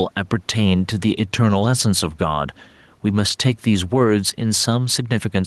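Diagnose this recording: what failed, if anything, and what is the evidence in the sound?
Gain pumping throughout. The gain swings by around 5 dB with louder speech. The likely cause is input gain set too high, with a fast limiter reacting.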